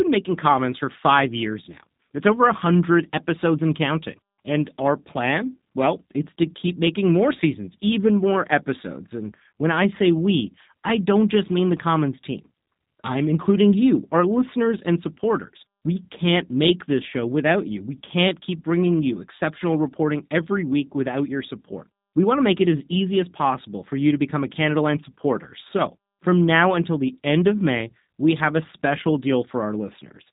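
Speech throughout carries plainly audible G.729 codec damage: nothing above 3.8 kHz, plus a rough, synthetic buzz from pulse-built excitation that sets it apart from a simple low-pass filter, and which fits an 8 kbit/s stream.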